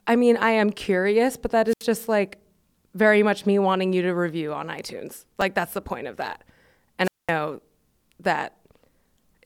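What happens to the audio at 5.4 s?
At 5.41 s, just before "that's the point of", a repeated buffer plays one tiny 2.67 ms slice two extra times, which fits a 128-sample buffer. The hard joins make a brief click-buzz rather than a silent gap, so it's not a dropout.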